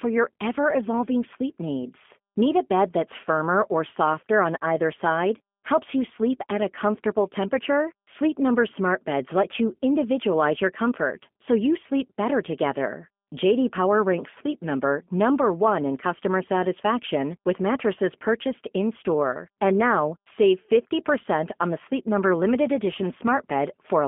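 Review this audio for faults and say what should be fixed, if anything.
The speech sounds narrow, slightly rough and synthetic throughout, with nothing above about 3.4 kHz or below about 200 Hz. That is G.729 codec damage: the voice is rebuilt from a vocal tract filter, a pitch predictor and sparse pulses, which fits an 8 kbit/s G.729A link. Keep a wideband codec such as G.722 or Opus end to end, and record locally rather than from the call path.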